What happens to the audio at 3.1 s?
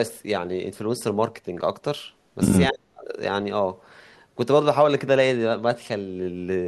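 At 3.1 s the speech is near the end of a stretch of speech suppressed in double talk, running from 2.71 to 3.14 s. The level collapses by as much as about 40 dB, so the talker nearly vanishes for roughly 0.4 s. This is likely an echo canceller that heard both ends at once, mistook this talker for loudspeaker echo, and turned everything down. On a waveform the envelope pinches almost flat; a spectrogram shows a dark vertical gap across the band.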